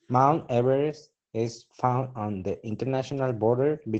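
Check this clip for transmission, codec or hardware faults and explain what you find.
One codec fault runs through the whole clip: Opus voice compression. From start to finish the speech is confined to roughly 8 kHz and sounds muffled, hoarse and faintly robotic. That points to the SILK linear-prediction coder at a low rate, around 12 kbps, which trims the band to wideband and quantises the excitation coarsely. The damage is plainly audible, and the codec runs in 20 ms frames.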